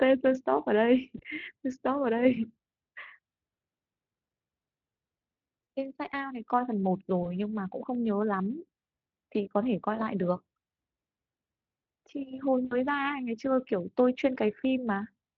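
It's a speech recording with four short dropouts where VoIP packet loss was concealed by the speech codec, at 1.17–1.21 s, 5.63–5.67 s, 7.23–7.32 s and 12.65–12.77 s. Each time, the decoder fills the gap by stretching the last bit of voice into a brief, fading smear. The losses sound like roughly 20, 40, 20 and 60 ms, which fits one to three 20 ms frames. The damage outlasts the gap itself, especially at 7.2 s and 12.7 s, while the decoder recovers. Underneath it all you can hear the Speex coding, which sounds like a fairly high-rate setting with only light colouring.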